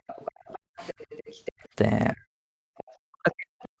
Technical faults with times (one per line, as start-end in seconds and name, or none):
0.00-0.77 background gated by the echo canceller
0.07-1.52 other side's voice leaking through
1.52-1.73 background gated by the echo canceller
2.13-2.24 speech suppressed in double talk
2.52-2.73 background gated by the echo canceller
2.77-3.80 other side's voice leaking through
3.01-3.80 speech suppressed in double talk